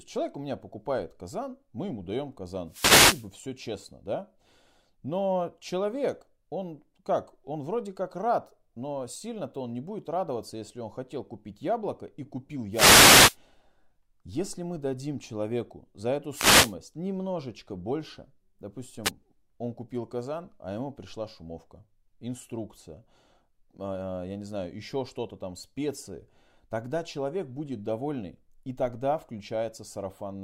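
Short swishes of static break through the speech at 2.68–3.29 s (after "казан мы ему даем"), 12.71–13.37 s (after "купить яблоко и купил"), 16.30–16.75 s, and 19.04–19.11 s (before "он купил казан а"). These are wireless microphone noise hits: the FM radio link fades as reflections cancel, so receiver noise surges up over the signal.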